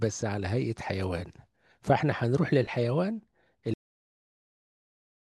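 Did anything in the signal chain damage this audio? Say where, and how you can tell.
Yes. The speech has a cut-off end at 3.74 s. It stops mid-sound and drops straight to digital silence, with no decay. The final buffers were never written to storage. The silence runs from there to the end of the file.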